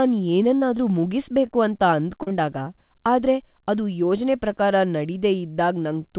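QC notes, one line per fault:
0.56–0.63 s, burst of packet loss: about 60 ms of audio failed to arrive in time. The receiver filled roughly 53 ms by extending the last sound it had and lowering its level across the gap, which produces a short held buzz or fading hiss in place of the real signal. Playback then picks up past the hole, so the missing stretch is skipped, not delayed, and the sound seems to jump forward.
0.77 s, 1.47–1.51 s and 2.23–2.33 s, short concealed packet loss: brief runs of missing audio, 20 ms at 0.77 s and 1.47 s, and two back-to-back losses totalling about 60 ms at 2.23 s. Each time the receiver patched the gap by continuing the preceding sound, either from its pitch or as shaped noise, for about 12 to 38 ms, then crossfaded back into real audio. This is heard as a quick smear or wobble, and a short consonant can drop out. The narrowband call path, which has nothing above 4 kHz and points to G.711 A-law at 64 kbps, leaves these patches with a dull, band-limited colour.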